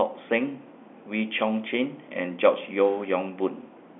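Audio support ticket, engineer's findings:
No faults found.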